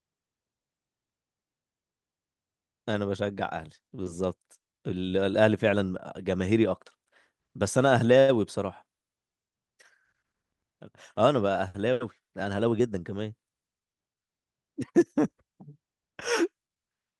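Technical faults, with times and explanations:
8.19 to 8.31 s, short stall from a late packet: a packet arrived late, the jitter buffer ran dry, and the receiver stretched the last sound for about 89 ms until it came. Nothing is lost, unlike a dropout; the sound is held too long with a faint buzz or dip.
12.19 to 12.95 s, jitter buffer speed-up: with surplus audio queued, the receiver cut short pitch-period slices repeatedly, removing roughly a tenth of a second. The speech runs about 10% faster at unchanged pitch, sounding hurried rather than chipmunk-like as with resampling.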